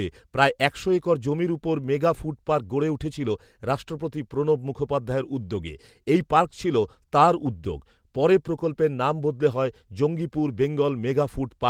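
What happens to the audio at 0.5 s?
At 0.5 s the speech plays through intact, with no dropout, click, distortion or other disturbance at that moment.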